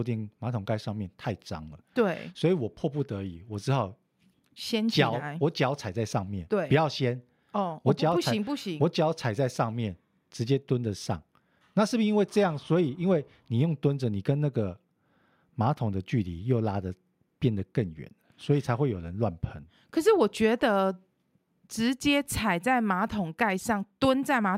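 Speech recording, with no technical faults heard anywhere.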